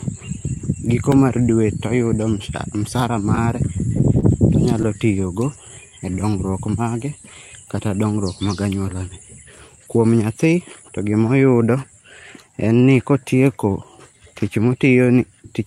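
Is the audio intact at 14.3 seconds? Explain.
Yes, the speech at 14.3 seconds is intact, with no dropout, distortion or other fault at that moment.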